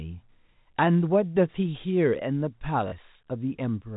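A speech recording carried over G.711 telephone coding, with the band capped at 4 kHz, suffers packet loss with the last packet repeated at 2.88 to 2.92 s. About 40 ms of audio went missing, which fits two 20 ms packets, and the receiver replayed its previous packet to cover the gap, so the sound briefly stutters with a robotic buzz near 50 Hz.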